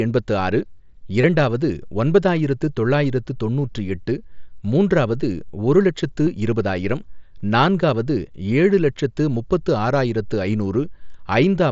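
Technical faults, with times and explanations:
1.21–1.24 s, 6.26 s and 7.39 s, concealed Bluetooth headset packet loss. Headset packets dropped, and the phone refilled each gap with a repeat of the latest waveform. The 1.21 s gap, about 22 ms, gives a buzzy hold at full level. The single lost packet after "ஒரு லட்சத்து" passes almost unnoticed, while the two-packet run before "நான்காவது" gives a shorter buzzy hold.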